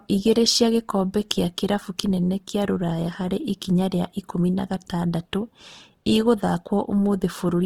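Throughout, likely Opus compression starved near 16 kbps fills bands with noise, so the full-band speech, reaching 20.2 kHz, sounds plainly rough and grainy.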